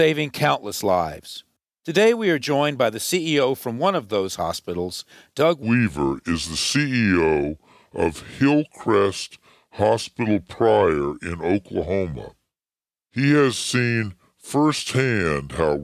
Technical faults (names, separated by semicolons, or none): wrong sample rate